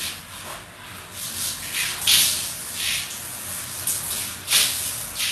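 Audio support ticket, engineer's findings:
Throughout: treble synthetic, gritty and metallic, with nothing above 12.3 kHz. Heavy codec damage. Likely HE-AAC compression, the v2 profile at a very low rate, fitting roughly 16 kbps. Upper band rebuilt by spectral band replication: lower spectrum copied upward and shaped by a coarse envelope. Replicated harmonics misalign across the crossover, so the treble is not the original.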